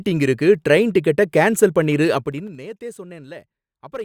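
Zipper noise runs from 2.14 to 2.62 s, where the speech level drops by roughly 20 dB in unsmoothed steps of about 3 dB, around fifteen per second. Each abrupt jump leaves a small click, so a quick ticking rides on the fade.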